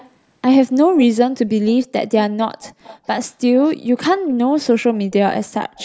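At 0 to 0.11 s, 1.69 to 1.87 s, 2.62 to 3.07 s, 4.94 to 5.13 s and 5.77 s to the end, a faint delayed copy of the speech sits roughly 25 to 30 dB down. Its delay creeps from 324 to 347 ms. This is an echo leak, likely from a far-end loudspeaker whose echo canceller let residue through. Unlike room reverberation, it is a distinct, discrete repeat arriving in scraps, not a smooth decaying tail.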